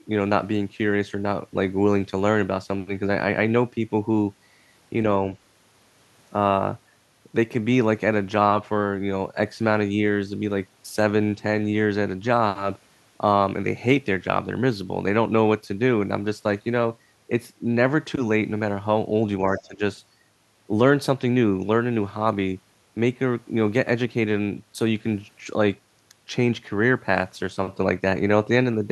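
A speech recording with a brief echo-control problem near 19.5 s. From 19.5 to 19.61 s, the other side's voice is leaking through about 15 dB below the talker, likely residual loudspeaker echo, visible as faint, separate harmonic traces on a spectrogram. Overlapping it, from 19.56 to 19.81 s, the talker's speech is suppressed in double talk, likely the echo canceller ducking both voices, showing as a waveform dip of around 15 dB lasting roughly a fifth of a second.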